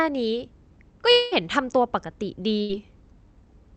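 From 1.11 to 1.33 s the speech stops and the last sound is stretched into a fading buzz or hiss lasting about 200 ms, with no fall to full silence before the speech picks up again, about 200 ms further on than it should. The cause is likely a long network dropout: nothing arrived for that stretch, the receiver extended what it last had, and the missing audio was skipped.

At 2.61 s a shorter break runs to 2.71 s. This is a burst of packet loss: roughly 80 ms of audio never arrived in time to be played, so the receiver held the final sound for about 77 ms while turning it down, giving a brief fading buzz or hiss. The speech then resumes past the lost portion, leaving a small jump in continuity.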